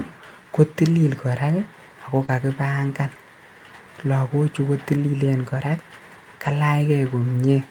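At 1.07 to 1.09 s, a lost packet rebuilt from error correction: the next packet carried a low-bitrate copy, so there is no gap, only a brief rougher, noisier patch. At 2.25 to 2.30 s comes a short concealed packet loss. Nothing arrived in time, so the decoder extended the preceding sound for about 25 ms, and it blurs into a smear rather than turning grainy. The last 20 ms of that stretch, 2.28 to 2.30 s, was again rebuilt from the error-correction copy. The same grainy rebuild recurs at 4.94 to 5.00 s, lasting 40 ms, which fits two lost packets, and at 6.46 to 6.48 s.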